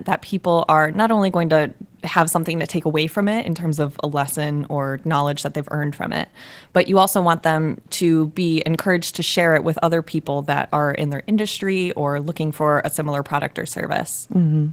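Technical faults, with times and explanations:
Throughout, Opus voice compression: the speech is plainly hoarse and slightly robotic. A linear-prediction layer codes the lower band with coarse excitation, while a thin transform layer above 8 kHz keeps the top sparse and smeared, which fits a bitrate near 16 kbps.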